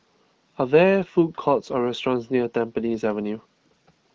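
No faults can be heard in this speech recording.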